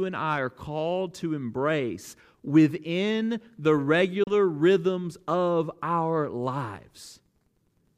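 At 4.23 s the speech cuts to silence until 4.32 s, a short hole, likely a Bluetooth dropout where late wireless packets were discarded. Unlike a stall, speech resumes as if it had kept playing, fitting two lost frames.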